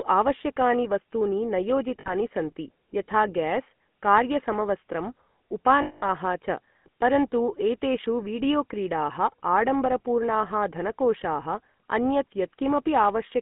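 Across the whole speech clip the voice has a buzzy, gravelly roughness and a narrow, boxy tone, with nothing below about 150 Hz or above 3.4 kHz. That is the GSM full-rate codec: the vocal tract is modelled and driven by sparse, regularly spaced pulses, which fits a 13 kbps GSM stream.

From 2.00 to 2.14 s, and again from 5.82 to 6.08 s just before "च परन्तु एतेषु वीडियोक्रीडाः", the sound freezes into a rough, metallic ring. These are lost GSM frames: the decoder repeats the last good frame, over about 60 ms and then 200 ms.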